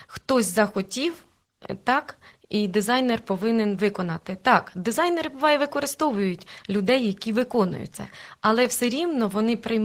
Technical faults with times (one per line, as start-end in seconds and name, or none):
0.00-9.85 Opus voice compression